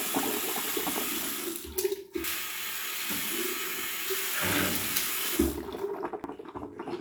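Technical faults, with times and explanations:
0.4 s, 2.24 s and 6.24 s, dropped buffer (overrun). Each time the sound jumps forward with no gap of silence. Roughly 70 ms is missing at the first two points and about a tenth of a second at the last. The likely cause is that the recording software fell behind and the hardware overwrote samples before they were collected. The audio on either side of each lost piece is joined directly, which produces the jump.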